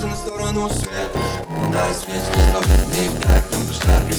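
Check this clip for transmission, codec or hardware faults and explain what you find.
One fault runs from 0.69 s to the end. Block size mismatch (padded): zero-filled gaps in each block cause a 91.9 Hz buzz and 0.919x speed. Unlike a sample-rate error, the timbre stays unchanged.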